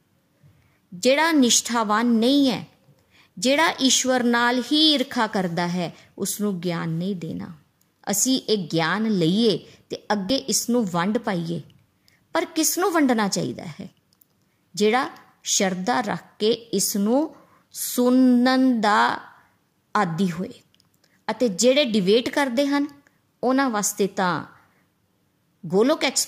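At 10.3 s the speech jumps abruptly, likely a dropped buffer (overrun) in which a short piece, around 10 ms, was never read and the two edges were spliced together. The waveform shows a sudden discontinuity with no gap, and the spectrogram a thin vertical broadband line.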